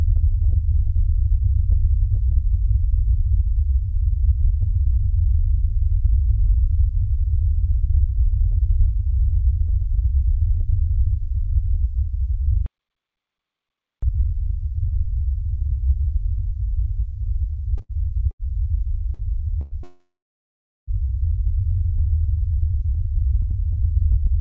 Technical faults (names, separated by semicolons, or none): playback stall; time-compressed catch-up; short stall from a late packet; call audio freeze; jitter buffer speed-up